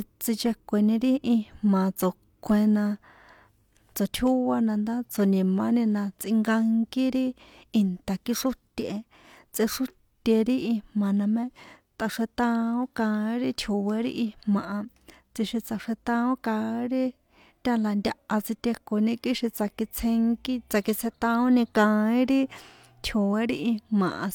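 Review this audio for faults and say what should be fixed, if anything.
Nothing here needs fixing; no faults were found.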